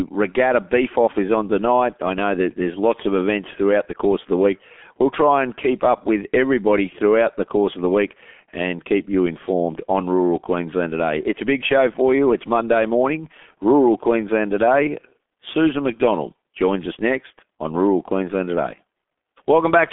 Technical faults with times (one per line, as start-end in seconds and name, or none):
0.00-19.93 G.723.1 codec